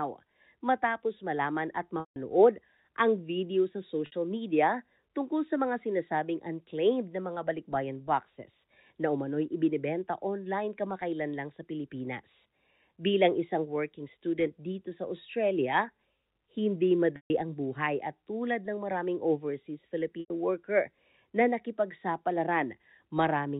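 Packet loss with pitch repetition shows up four times: 2.00–2.16 s after "matapos malaman at", 4.06–4.12 s after "ang video sa", 17.16–17.30 s, and 20.20–20.30 s after "tulad ng maraming overseas". Each 60 to 160 ms gap gets patched by looping the last pitch period, so you hear a brief buzzy hold that fades on the longer drops.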